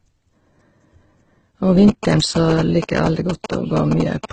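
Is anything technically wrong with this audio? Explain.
Yes, two faults are audible in this speech clip.

Throughout, there is transcoding between lossy codecs. The sound was likely encoded at a low bitrate, such as Opus, then re-encoded with HE-AAC. The second encoder wastes bits on the first one's artefacts and adds its own, and nothing survives above 8.9 kHz. Unlike a single low-bitrate encode, two distinct textures of artefact are heard layered together.

From 1.88 s to 4.26 s there are GSM signalling bursts. A nearby 2G phone transmits brief groups of radio bursts, which the audio circuit rectifies into a galloping dit-dit-dit of short buzzes at a 217 Hz repeat rate, roughly 10 dB below the speech. Mains hum is a steady tone, but this interference starts and stops in rhythmic clusters.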